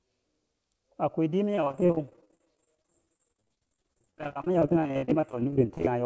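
From 1.55 s to 5.87 s the speech suffers repeated packet loss, giving it a robotic sound. Around a hundred brief holes, none longer than about 40 ms, keep interrupting it, and each is patched by stretching the preceding sound. Roughly a third of that stretch is filled this way, so the speech turns choppy and robotic. A spectrogram shows smeared, repeated frame patterns and broken harmonics beneath a ceiling at 8 kHz from the call codec.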